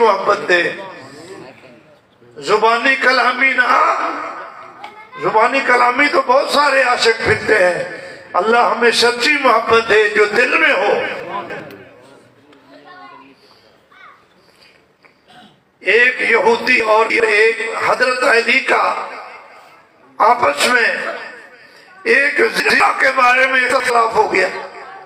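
Chunks out of order at 11.2–11.6, 16.8–17.2, 22.6–22.8 and 23.7–23.9 s: a 100 ms chunk plays three places late in the first two and one place late in the last two. Each jumbles the sound briefly, with three hard joins.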